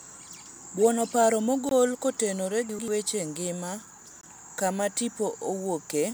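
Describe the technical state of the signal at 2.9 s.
Chunks out of order: from 2.69 to 2.88 s, one block of about 93 ms was written one chunk late and plays after its successor. Nothing is lost, but the speech jumbles briefly, with three hard joins.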